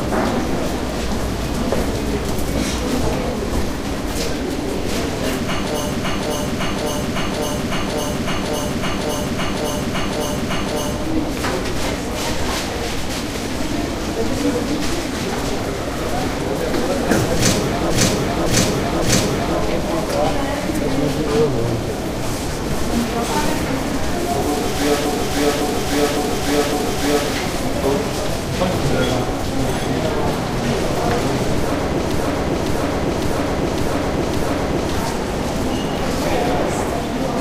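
Repeated frames at 5.92–10.94, 17.90–19.58, 25.06–27.29 and 32.12–34.90 s: a 0.56 s block of compressed audio replays in a stutter, lengthening the audio each time.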